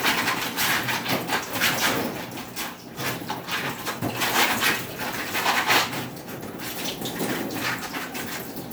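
Sound recording, with no technical faults audible anywhere in it.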